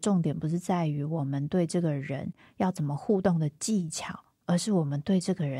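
No faults audible in this speech recording; nothing to log.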